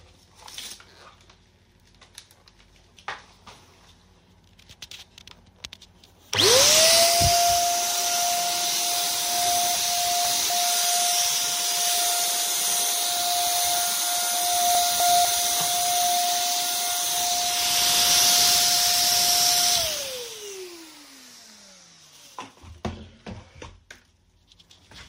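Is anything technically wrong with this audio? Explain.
Yes. Chunks out of order appear from 9.75 to 10.5 s and from 14.75 to 15.25 s. A 250 ms chunk was delivered late, by two chunks and then by one, and played after audio meant to follow it. Each spot sounds briefly jumbled, with three hard joins.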